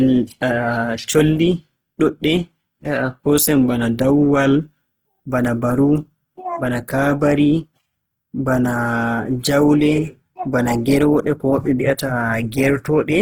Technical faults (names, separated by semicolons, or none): Opus compression